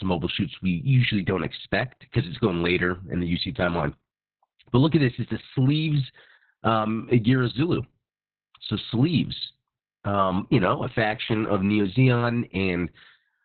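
From start to finish the speech carries heavy Opus voice compression. Nothing survives above about 4.3 kHz, so it's narrowband and muffled, and the coarse SILK excitation coding leaves it hoarse and a bit robotic, which fits a very low bitrate of around 6 kbps.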